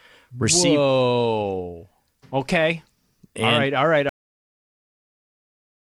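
A cut-off end arrives at 4.09 s, right after "all right all right": the speech stops mid-sound and the signal falls straight to digital silence, which holds until the clip finishes. There is no natural decay or room tail, just an abrupt wall. The final stretch of audio buffers was never written out or played back, so the recording simply ends where the data ran out rather than where the sound did.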